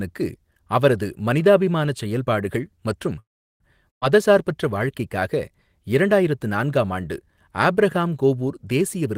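At 3.19 s, just after "அவரது மனிதாபிமான செயல்பாடுகள் மற்றும்", the speech stops and goes silent until 3.63 s, then resumes intact. This is a call audio freeze, likely from delayed packets draining the jitter buffer.

At 3.90 s a burst of packet loss cuts out about 120 ms of speech, leaving near-silence until 4.05 s before the audio continues further on.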